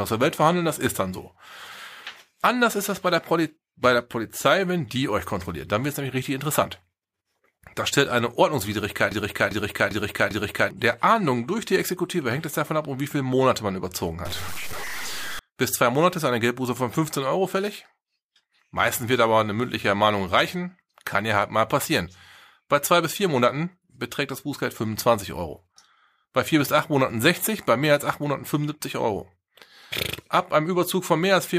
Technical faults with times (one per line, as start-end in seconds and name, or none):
9.11-10.71 broken-record loop
14.25-15.39 stuck bit